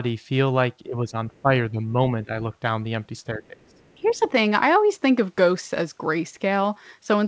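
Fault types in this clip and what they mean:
speech suppressed in double talk: The speech dips in four short spells between 0.85 and 4.21 s. It drops by up to about 15 dB. The likely cause is an echo canceller turning the talker down while the far end spoke at the same time.
other side's voice leaking through: A faint second voice comes through twice. The first is a brief scrap near 1.4 s. The second lasts about half a second, from 3.7 to 4.28 s. It sits roughly 30 to 40 dB below the speech, likely as loudspeaker echo left in the microphone signal.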